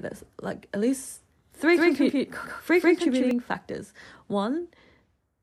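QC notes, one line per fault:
1.73–3.31 s, doubled audio track: the speech is most likely being picked up a second time through a slower route, or an edit has left two copies out of step, so a full-band duplicate runs around 150 ms behind the original at roughly the same loudness. Every syllable gets a distinct, dry slap-back with no decay or room colour, and the copy starts and stops abruptly at the edges of this span.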